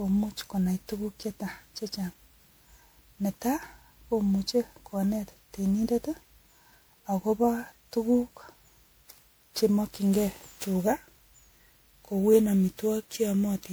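Throughout the speech, the sound is swirly, hollow and smeared, with blurred consonant attacks. This is likely generation loss from repeated MP3 re-encoding, about fifteen passes.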